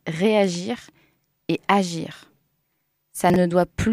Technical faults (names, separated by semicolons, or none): chunks out of order